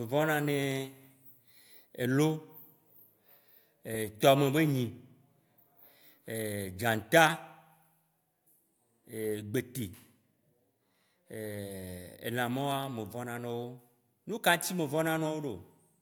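Listening to the speech recording, nothing stood out as a technical problem at any point.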